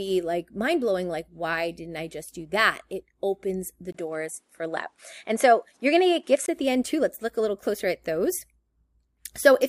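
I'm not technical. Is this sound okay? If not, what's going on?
No. The recording likely switched to a poorer input device from 3.92 to 6.48 s, after "that it opens the" and until "at the end too". The sound briefly blanks, turns duller with nothing above 11.5 kHz, and picks up faint new background noise at the same loudness.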